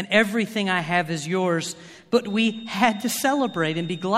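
From 2.18 s, after "I have is yours", a faint 3.7 kHz feedback whistle wavers to the end, unlike a steady tone, likely from a loudspeaker-microphone loop.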